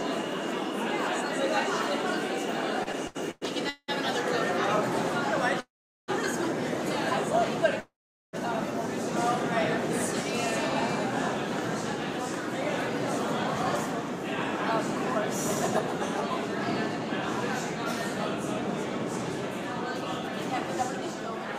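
Packets reaching the receiver late and irregularly left its jitter buffer empty five times between 2.83 and 3.9 s, giving repeated stalls (stutter). At each stall the last sound is stretched onward to cover the wait, the longest about 187 ms. Around 0.4 s of bridging fills that stretch, close to two fifths of it, so the audio drags and hiccups forward while nothing drops out. Two call audio freezes follow, at 5.6 to 6.1 s and 7.8 to 8.35 s, likely from packets held up in transit long enough to drain the buffer completely. In each, the last sound briefly carries on, then fades to silence for roughly 0.4 s before the audio resumes exactly where it stopped. That inserts gaps of about 0.48 and 0.53 s and pushes everything after them later, with nothing lost.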